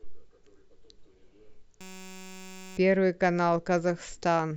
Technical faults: system hang loop

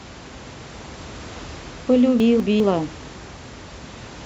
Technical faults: chunks out of order

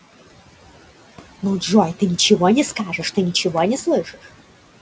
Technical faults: noise suppressor artifacts

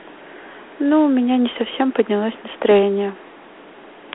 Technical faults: Dialogic VOX ADPCM

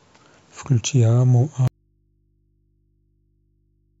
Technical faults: audio dropout to a faint residue

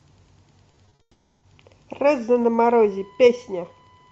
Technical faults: repeated packet loss (robotic sound); long network dropout; USB whine

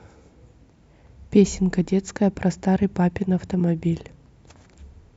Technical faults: none

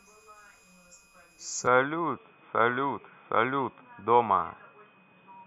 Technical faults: switching supply whistle; input switched to a poorer device

